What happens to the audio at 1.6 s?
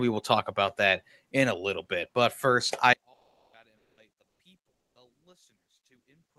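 Nothing goes wrong at 1.6 s: the speech there runs on intact through the WebRTC call path, with no dropout, glitch or distortion at that point.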